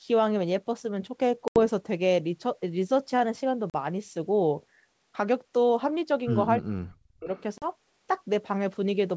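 At 1.48 to 1.59 s the sound drops into a hard-edged silent hole of about 80 ms, which fits roughly four lost packets. This is packet loss on an ADPCM call. Because ADPCM codes each sample as a change from a prediction, the receiving decoder's predictor and step size drift out of step with the sender's during the gap. The sound comes back slightly distorted, a brief roughness that settles within tens of milliseconds. That recovery smear separates it from a simple mute. The same thing happens at 3.70 to 3.75 s, a 40 ms gap of about two packets.

From 6.59 to 7.3 s the speech is pushed down in level, at its deepest by around 40 dB, for roughly 700 ms. This is most likely speech suppressed in double talk: with both ends active, the echo canceller cannot tell the talker from loudspeaker echo and attenuates everything. Unlike the packet gaps, this is a dip in level rather than a silent hole. 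The sound sinks.

Right after, at 7.35 to 7.42 s, a faint delayed copy of earlier sound appears, lagging by 334 ms and sitting about 30 dB below the speech. This is an echo leak, likely from a loudspeaker end whose canceller let some of its microphone pickup through. It differs from reverberation because it is a distinct repeat at one fixed delay, not a smooth tail.

At 7.58 to 7.68 s another 40 ms loss, about two packets, gives the same hard hole and ADPCM recovery, carried over the 64 kbit/s G.722 wideband path.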